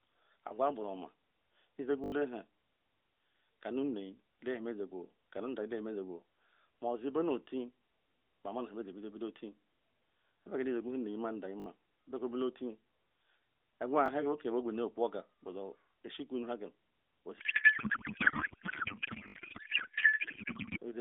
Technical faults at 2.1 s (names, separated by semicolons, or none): repeated buffer